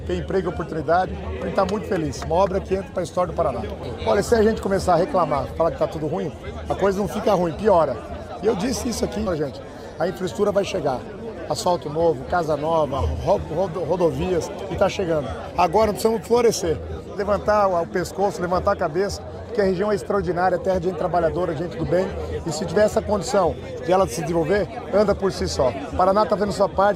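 At 9.26 to 9.30 s the sound jumps abruptly forward with a short blip at the join, so the material on either side does not follow on. This is likely a stream segment skipped: one segment failed to load and playback resumed from the next.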